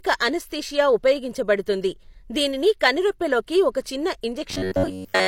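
A speech clip whose final stretch, from 4.50 to 5.27 s right after "ఒక చిన్న", shows robotic sound from repeated short buffers. Audio likely arrived too seldom, so playback kept looping a chunk of about 11 ms for roughly 70 percent of that stretch, skipping the real signal. This imposes a rigid, metallic buzz at about 94 Hz.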